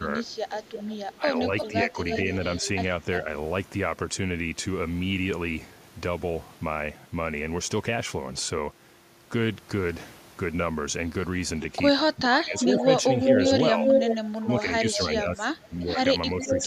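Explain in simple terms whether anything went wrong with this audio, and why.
Two problems show up in this speech, and they overlap.

Speech suppressed in double talk: the voice dips from 0 to 0.29 s, again from 1.21 to 1.91 s, and most heavily from 12.25 s to the end. Both sides were likely talking at once, so the call's echo canceller turned down both the voice and the loudspeaker echo. The voice itself gets weaker, with nothing extra added.

Echo leak: a delayed copy of the voice trails behind it from 0.5 to 2.67 s, lagging by about 0.35 s and sitting quieter than the speech. It comes back from 12.57 to 14.16 s, now louder than the speech and lagging about 0.4 s, then briefly from 14.92 to 14.97 s and from 16.41 s to the end. It is likely the loudspeaker's sound that the echo canceller failed to remove. Unlike the suppression, this adds a second, late copy of the voice instead of taking sound away.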